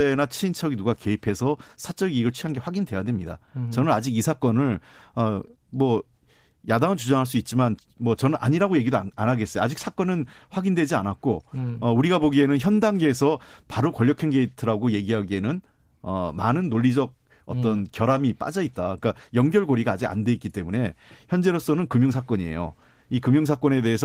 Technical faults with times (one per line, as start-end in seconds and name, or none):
none